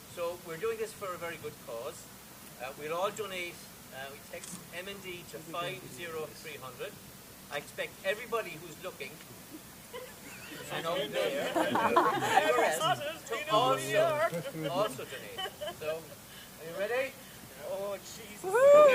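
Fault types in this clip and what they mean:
Low bit depth with dither: throughout the clip, the audio is stored with very few amplitude steps, a coarseness that fits a 7-bit word. Random dither was added before each sample was rounded, so the rounding error no longer tracks the waveform as harmonic grit. It spreads out instead as a steady, even white hiss sitting roughly 20 dB below the signal. The hiss stays constant through loud and quiet passages, with no distortion.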